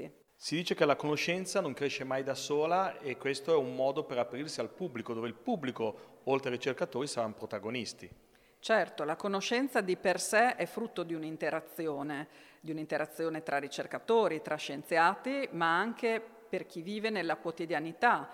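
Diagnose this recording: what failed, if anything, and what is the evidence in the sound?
Nothing in the chain seems to have failed here, since no stage from the wiring through to playback leaves any audible trace of trouble at any point in the recording.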